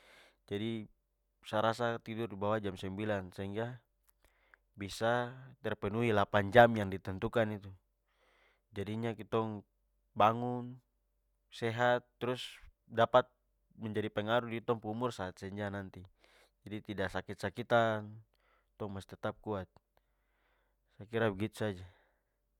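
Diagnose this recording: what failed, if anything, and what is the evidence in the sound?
Nothing in the recording stood out as a fault on careful listening, so there is no failed stage to point to.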